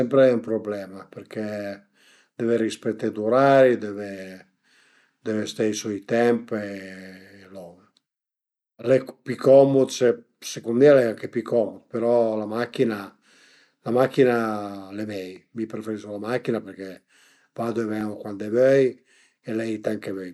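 From 2.16 s to 18.0 s the speech carries a regular tick every 2.64 s, about seven in all. It is likely clock drift buffer slips: two clocks disagreeing by roughly 150 ppm let the buffer drift until a block of around fifteen samples is dropped or repeated. On a waveform each slip shows as a small step where the signal jumps; on a spectrogram, as a thin broadband vertical line at the same even spacing.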